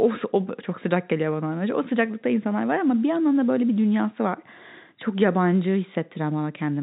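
Speech carried through G.711 telephone coding, with the audio band ending around 4 kHz and at most a faint level-following quantisation hiss, as that format normally sounds, and no technical fault can be heard.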